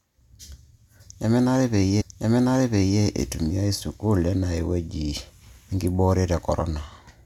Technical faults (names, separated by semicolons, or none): stream segment repeated